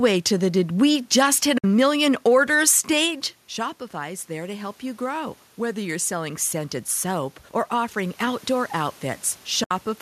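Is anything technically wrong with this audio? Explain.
Yes. AAC frame loss with muting occurs from 1.58 to 1.64 s, between "did we just hit" and "million orders", and again from 9.64 to 9.71 s. The decoder zeroes the missing frames, so the overlapping windows fade the sound out and back in, leaving soft 60 ms and 70 ms holes, consistent with six and seven 10 ms frames.

Automatic gain rising runs from 3.01 to 9.02 s, after "million orders". The talker moves away at about 3 s, dropping the level by about 12 dB, and the gain control slowly pushes it up about 8 dB, swelling voice and room noise together.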